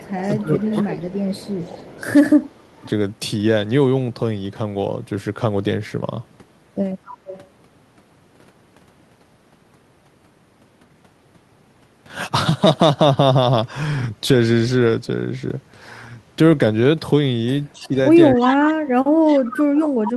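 Echo leak appears from 0.0 to 0.81 s and again at 1.35 to 2.05 s: a copy of the far side's speech trailing by 263 ms, about 15 then 25 dB below the talker, likely because a loudspeaker endpoint's echo canceller left residue in its microphone path. Overlapping this, speech suppressed in double talk runs from 0.39 to 2.86 s, with the talker's level dipping by roughly 25 dB in patches as both sides speak, likely the canceller attenuating everything it could not separate. The echo returns at 7.05 to 7.46 s and 17.73 to 17.89 s, about 20 and 25 dB down. Suppression resumes from 17.8 s to the end, cutting as deep as roughly 35 dB, while echo bursts appear at 18.45 to 18.73 s, only about 5 dB below speech, and 19.28 to 19.79 s, about 15 dB down.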